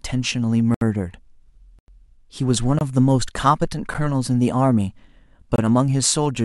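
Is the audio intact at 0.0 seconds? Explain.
Yes, at 0.0 seconds the audio is intact, with no fault audible at that moment.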